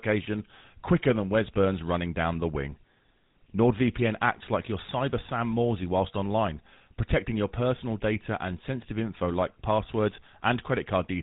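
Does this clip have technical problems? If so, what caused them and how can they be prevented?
Yes. Throughout, GSM full-rate codec damage gives a buzzy, gravelly voice; the codec's narrowband path leaves a spectrogram empty above 3.8 kHz, consistent with 13 kbps GSM. Prevent it by capturing over a wideband path instead of a GSM call.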